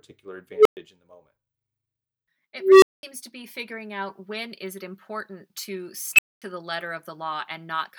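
An unstable filter bites three times, each a feedback loop running away until it overflows: at 0.54 s a low tone near 400 Hz swells over 114 ms then drops out for 116 ms; at 2.58 s the same pitch climbs for 242 ms, then 209 ms of silence; at 6.13 s a shriller squeal near 3 kHz blows up in 55 ms, then dead air for 232 ms.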